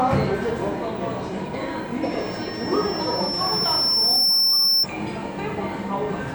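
At 2.02 s a loudspeaker feedback squeal starts: a microphone is hearing the loudspeaker it drives, and at 5.4 kHz the loop gain has gone past one, so that frequency keeps feeding itself. It rises over roughly two seconds into a piercing single tone, ending up about 5 dB above the rest of the sound, and cuts off at 4.87 s. A fixed interfering whistle would sit at a steady level from its onset, whereas this tone swells on its own.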